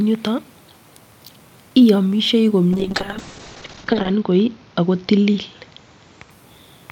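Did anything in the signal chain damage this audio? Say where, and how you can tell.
Yes. A call bitrate drop at the codec stage, from 2.73 to 6.36 s, makes the speech rough and muffled, worst for about 1.4 s. The spectrogram's top edge falls from 20 kHz to 8 kHz, consistent with the encoder dropping from about 64 to 10 kbps.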